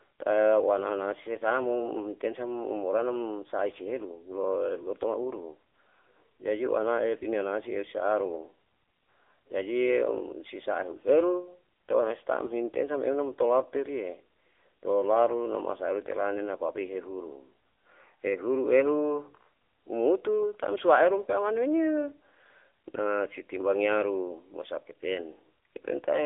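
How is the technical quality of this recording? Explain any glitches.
The speech has been carried through an AMR narrowband mobile codec for the whole clip, and the damage is plainly audible. The codec samples at 8 kHz and rebuilds the speech from a vocal-tract model excited by a few pulses per 5 ms subframe. The sound is confined to roughly 300 Hz to 3.5 kHz, with nothing above 3.7 kHz, giving a thin telephone tone. The buzzy, synthetic quality fits a low bitrate of around 8 kbps.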